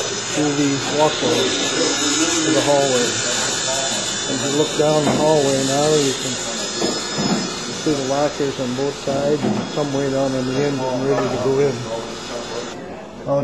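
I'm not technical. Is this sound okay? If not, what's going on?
No. At about 11.18 to 11.20 seconds there's a brief, loud blip, like a tiny chirp or burst of noise. This is a corrupt frame decoded: a couple of damaged chunks of the compressed audio were played anyway, producing sound that doesn't belong.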